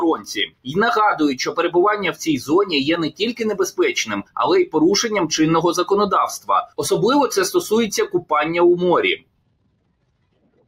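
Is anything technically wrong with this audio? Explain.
Yes. A speech-tuned noise suppressor is running on this non-speech sound throughout. It treats sustained tones and tails as noise, so the level pumps, with gain swings of around 20 dB.

The same noise suppressor cuts the sound hard at 0.15 to 0.76 s, 3.09 to 3.41 s, 8.14 to 8.31 s, and from 9.16 s to the end, dropping it by about 18 to 19 dB.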